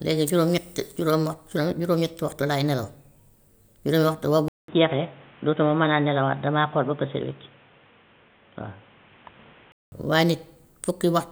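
At 4.48 s the speech goes quiet for about 200 ms. It then returns dull and boxy, with nothing above 3.8 kHz. A faint new background noise sits well below it. The level stays roughly the same. This is likely an input switched to a poorer device, such as a narrower-band microphone or a headset call profile. At 9.92 s the full bandwidth comes back and the sound clears.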